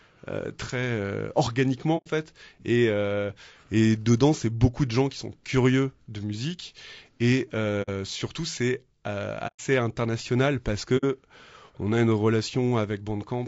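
Throughout, the speech sounds rough and grainy, with noise filling the gaps between harmonics, likely low-delay AAC compression at a low bitrate; unlike background hiss, the grain tracks the voice. AAC frame loss with muting then leaves soft-edged silent holes at 1.97–2.07 s, 7.82–7.90 s, 9.47–9.60 s and 10.97–11.05 s, fading out and back in.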